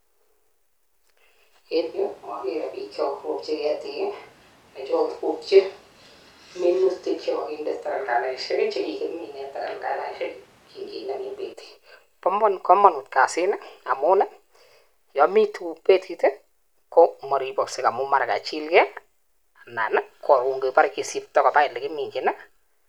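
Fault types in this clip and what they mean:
Switch to a distant microphone: from 1.8 s to 11.5 s the speech becomes roomy, hollow and bass-light at much the same level, with room noise about 30 dB below it, likely from a farther microphone. Unlike added reverb or a low-cut filter, it begins and ends abruptly.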